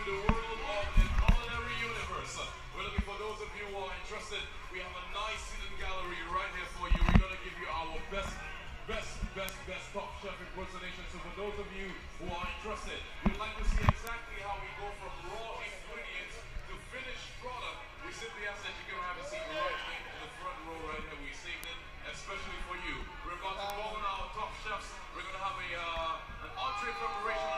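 From 0.32 s to 27.37 s there are word clock ticks: sharp, single-sample clicks at a steady rate of about five per second, around a hundred in all, of uneven strength. The receiving device runs on its own clock, not locked to the sender's, and the mismatch, on the order of 100 ppm, makes it drop or repeat a sample each time the clocks slip. The metronomic spacing is what separates this from random crackle or dropouts.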